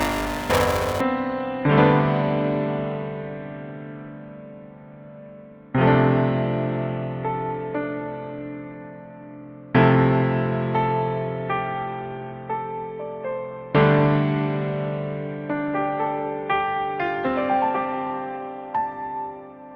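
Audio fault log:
0.00–1.01 s, buffer tearing: a 345 Hz robotic buzz rides the sound as most of each period, fitting a 128-sample buffer, replays audio a few milliseconds stale.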